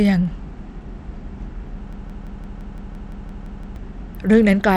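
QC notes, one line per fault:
Throughout: Bluetooth SBC compression. The treble thins and flickers in and out, and a gritty, grainy noise with aliasing clings to the speech. This is likely SBC at a low bit pool, consistent with a rate around 96 kbps. The codec splits the signal into a few wide sub-bands and hands out bits without modelling hearing, so the quieter top bands get starved while the remaining bands are coarsely quantised. That produces the plainly audible damage here.
1.93 to 3.76 s: broken-record loop. A fragment of about 0.17 s repeats back to back, exactly identical each time, giving a stuttering, machine-gun effect that runs for nearly two seconds, eleven repetitions in all. The likely cause is a stall in the player, encoder or stream, which kept re-sending the last buffered piece instead of new audio. Whatever speech should have played across that span is gone, and normal playback resumes only after the loop ends.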